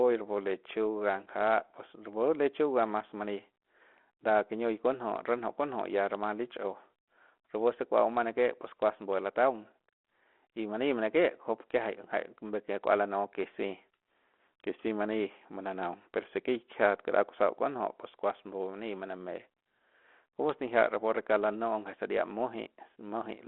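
The clip is speech, and nothing is technically wrong with it.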